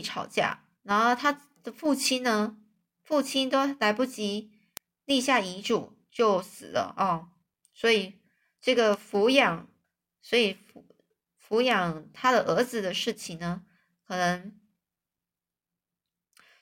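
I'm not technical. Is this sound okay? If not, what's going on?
No. Small sharp ticks, some louder than others, come about every one and a half seconds from 0.60 s to 15.88 s. These are word clock ticks: the receiving device runs on its own slightly mismatched clock, so whenever the two clocks slip, one sample of the speech gets dropped or doubled.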